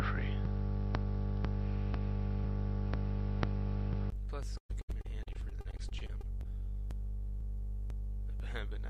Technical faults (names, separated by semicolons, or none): input switched to a poorer device; repeated packet loss (robotic sound); jitter buffer slow-down